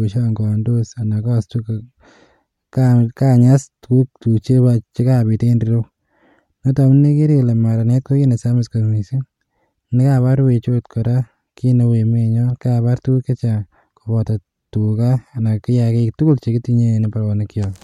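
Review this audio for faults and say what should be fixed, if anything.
No faults turn up in this audio, so there is nothing that needs to be fixed.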